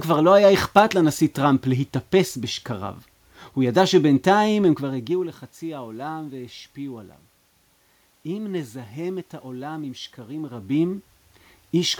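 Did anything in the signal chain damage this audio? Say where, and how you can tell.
No, nothing damaged it.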